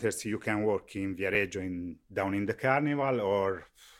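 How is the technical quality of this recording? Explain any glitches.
One glitch stands out in the speech. At 1.35 s, just after "you can work in" and before "in down in the", compressed frames were skipped: roughly one frame was not played, so the audio jumps ahead a few milliseconds.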